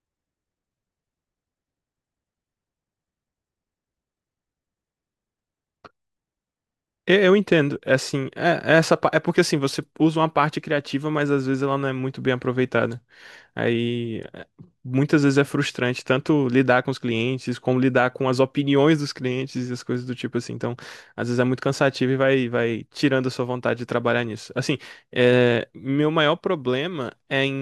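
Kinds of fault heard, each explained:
No technical faults can be heard in the speech recording: the signal stays steady and continuous throughout, with no audible breaks, distortion or level problems.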